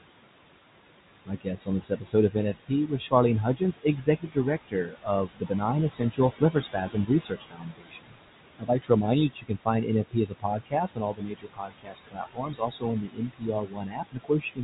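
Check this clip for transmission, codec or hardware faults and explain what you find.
A noise suppressor in the call chain is over-acting, and that is the main fault in this speech clip.

Noise suppressor artifacts run throughout. The suppressor pulls the bands it judges to be steady noise down by about 21 dB, frame by frame, so the background drops away between phrases and surges back under the voice.

Speech cut by the noise suppressor occurs at 1.25 to 3.12 s, 3.56 to 4.37 s, 4.68 to 8.19 s, 8.59 to 8.9 s just before "remind you", and from 9.31 s, just after "remind you", to the end. The suppressor mistook quieter parts of the speech for noise and attenuated them by about 18 to 22 dB, in brief stretches totalling from a fraction of a second to around a second and a half per span. Soft consonants and word endings sound swallowed or faint.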